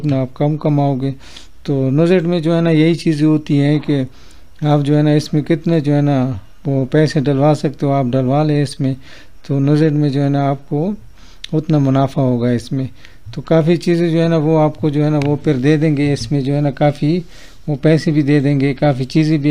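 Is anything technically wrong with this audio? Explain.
No, nothing is technically wrong with this audio.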